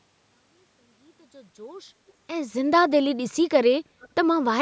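At 2.07 to 2.13 s and again at 4.0 to 4.09 s, a faint echo leak turns up: a short, delayed ghost of the speech about 315 ms behind, sitting roughly 35 dB and then 30 dB under the voice. It's most likely a speakerphone on the far end whose echo canceller let a bit of its own mic pickup slip back, so you get brief scraps rather than a full repeat.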